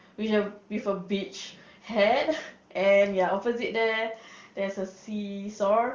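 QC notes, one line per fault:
No faults heard.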